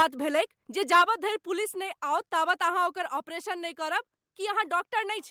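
Speech recording with two related problems. At 0 to 0.04 s and again at 0.92 to 1.02 s the loudest peaks break into a harsh crackle, microphone overload likely caused by input gain set too high, pushing peaks about 5 and 6 dB past the converter's limit. On a waveform these stretches show flat-topped peaks, roughly 10 and then 15 percent of samples pinned at the converter's limit, with broadband splatter in the spectrogram. The microphone volume is stepped down abruptly at 0.02 s, 1.02 s and 3.06 s, by about 4, 4 and 3 dB. Voice and background fall together, most likely because the call software detected clipping and cut the device's input gain. The first drop comes during the first distorted stretch and the second right after the second one. Each appears as a sudden shrink in waveform height and a uniform dimming across every frequency band of the spectrogram.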